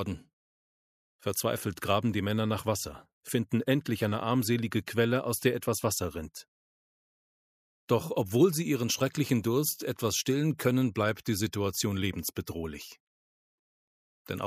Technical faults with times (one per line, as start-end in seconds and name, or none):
none